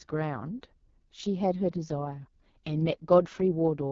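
From start to finish the speech sounds rough and raspy, with a buzzy, grainy edge on every syllable and no air above about 7.4 kHz. This is heavy damage from the AMR wideband (HD Voice) codec. The codec models the voice as pulses driving a vocal tract filter up to 6.4 kHz and fills the band just above with shaped noise. With this little data the model turns coarse, which fits the lowest 6.6 kbit/s mode.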